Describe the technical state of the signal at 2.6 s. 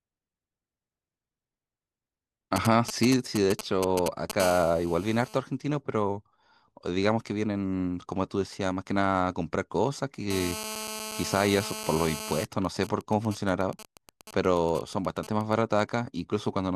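At 2.6 s the speech is overlaid by GSM signalling bursts, running from 2.56 to 4.32 s. A nearby 2G phone exchanging control traffic emits short radio bursts that the audio circuitry rectifies, producing a galloping dit-dit-dit of brief 217 Hz buzzes only slightly below the speech level.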